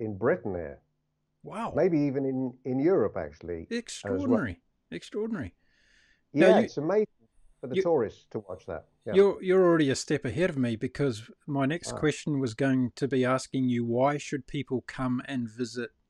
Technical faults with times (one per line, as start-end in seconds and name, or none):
none